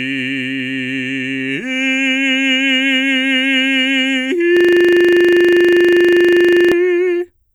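From 4.57 to 6.72 s the music freezes into a system hang loop. The machine stalled while the sound hardware kept replaying one 40 ms buffer, giving a rigid 25 Hz buzzing stutter. Unlike a dropout, nothing falls silent; the identical fragment repeats exactly.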